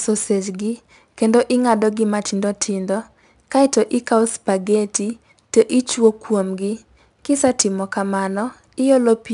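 Speech with 4-bit ADPCM compression throughout. Coarse 4-bit prediction steps leave gritty hiss on louder passages and roughen sharp onsets, nothing sounds above 10.6 kHz, and the sound fits a bitrate near 89 kbps.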